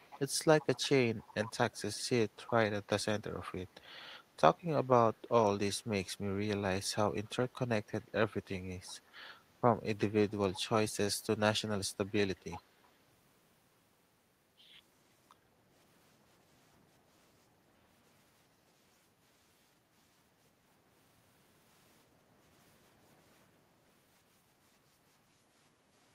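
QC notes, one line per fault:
0.0–3.02 s, 3.66–3.81 s, 7.24–7.30 s, 8.01–8.12 s, 8.86–9.11 s, 10.28–10.59 s and 12.36–12.89 s, echo leak: a faint copy of the speech trails it by 371 ms, in scraps and one longer stretch. It is loudest in the last burst, roughly 15 dB below the voice, and about 20 dB below in the opening stretch and at 10.28–10.59 s, dropping to roughly 30 to 40 dB below in the tiny middle fragments. This is likely a far-end loudspeaker whose echo canceller let part of the returning signal through.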